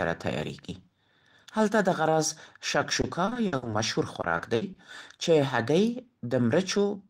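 From 3.01 to 3.75 s and again from 4.21 to 4.79 s, repeated packet loss makes the speech choppy, with pieces missing. Gaps of up to 60 ms are patched by stretching the previous sound. Unlike a single dropout, the holes keep recurring. From 6.77 s to the end, a jitter buffer speed-up trims around 40 ms of pitch periods, so the speech runs about 10% faster at unchanged pitch.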